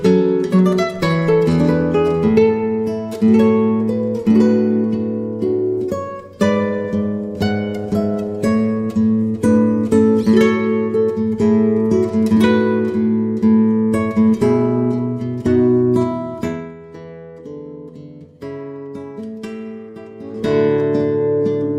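From 16.37 to 16.75 s, a gain change is applied in raw 1 dB jumps with no smoothing, causing zipper noise: the level falls by about 15 dB at some forty steps a second, and each step leaves a tiny click, so a fine ticking rides on the sound as it drops. The same fault returns from 20.14 to 20.59 s on a rise of about 15 dB, stepping around thirty times a second.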